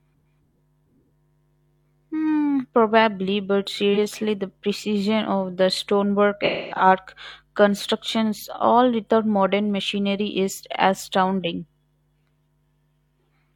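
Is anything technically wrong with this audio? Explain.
Yes, there's AAC frame loss with concealment. Right after "probably but" (3.94 to 3.97 s), a single lost frame gets patched from the previous spectrum and sounds like a brief smeared, noisy blip. After "precision of the stonework" (6.45 to 6.86 s), a longer run of about 300 ms gets the same treatment, so that stretch decays to a very faint noise floor and then fades back in.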